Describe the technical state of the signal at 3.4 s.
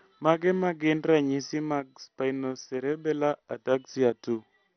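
At 3.4 s the speech has likely MP2 compression damage, present throughout. Starved sub-bands leave nothing above 6.1 kHz, giving a dull, gurgling, granular sound that fits a bitrate near 48 kbps.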